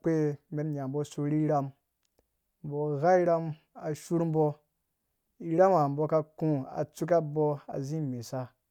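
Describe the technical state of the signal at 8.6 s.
At 8.6 s the signal is intact, with no fault audible at that moment.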